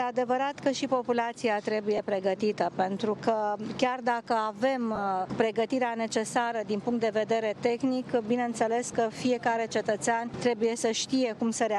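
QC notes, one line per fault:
1.97–1.99 s, 4.95–4.98 s and 8.93 s: lost LE Audio frames. Each spot has a brief grainy smear where the sound loses its clean tone and turns hissy for a moment, the longest at 4.95 s. The gaps run roughly 15 ms, 22.5 ms and 7.5 ms, which fits two, three and one 7.5 ms LC3 frames dropped over Bluetooth LE Audio. The decoder filled each gap by repeating the last spectrum with scrambled phase signs, and that repetition produces the noise. The light codec damage throughout is normal compression.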